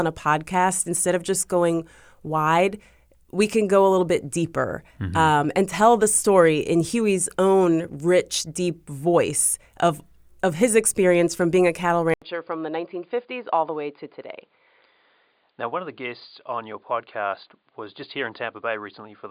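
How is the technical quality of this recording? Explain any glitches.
One glitch stands out. From 12.14 s, after "from being a cattle", the input likely switched to a poorer device. An 80 ms gap is followed by sound with nothing above 4.8 kHz, a few decibels quieter, over a new noise floor. A plain filter change wouldn't bring that gap or the new noise.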